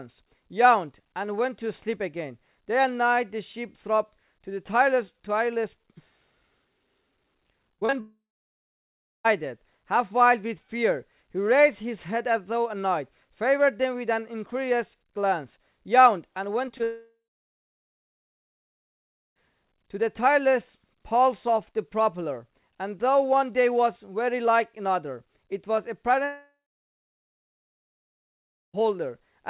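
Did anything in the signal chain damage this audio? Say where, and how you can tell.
Yes, at the network stage. Between 7.74 and 7.94 s there is repeated packet loss with a robotic sound: four holes, the longest 36 ms, patched by extending the previous audio. About half of that stretch is synthetic fill, so it comes out choppy with fragments missing.

A long network dropout is the likely cause of three longer breaks, at 8.00 to 9.26 s, 16.84 to 19.41 s and 26.24 to 28.75 s. Each starts with a brief fading continuation of the last sound. That is followed by silence lasting about 1 s, 2.2 s and 2.2 s respectively. The sound then resumes with the missing portion simply gone.

Short concealed packet loss appears just before the second dropout, at 16.68 to 16.72 s and 16.78 to 16.82 s. Each loses 20 ms that the receiver fills by continuing the preceding sound and blending back in, heard as a quick smear or wobble. 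All of this sits within the G.711 A-law call path's 4 kHz band limit.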